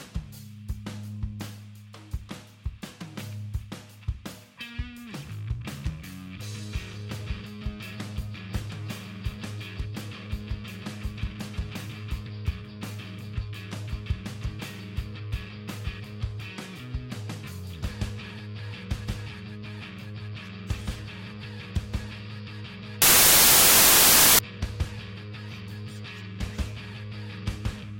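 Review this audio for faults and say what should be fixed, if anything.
From 23.02 to 24.39 s the audio gives way to a loud wash of harsh broadband noise lasting about 1.4 s. These are samples built from the wrong bytes: the reader assembles each sample with its bytes misaligned or in the wrong order, so the rapidly changing low-order bits land in the most significant positions and swamp the real signal. Prevention: declare and verify byte order and sample alignment explicitly at every read boundary.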